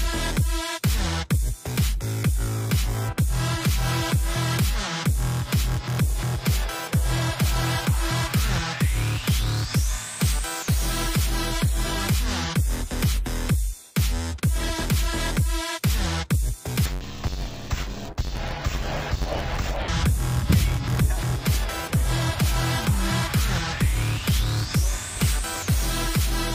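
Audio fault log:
16.86–19.89 s, interleaved audio read as planar: for about three seconds the sound turns dull and robotic, with a buzz near 92 Hz. Each roughly 11 ms block of alternating left and right samples is split down the middle, first half taken as left, second as right, so each channel plays a half-speed smear of both. Because the blocks are this short, there is no clear octave drop, only the block-rate buzz and muffling.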